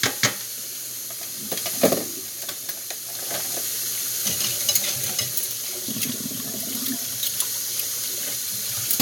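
Nothing here trips any alarm: the everyday sound comes through steady and whole, with nothing that needs a closer look.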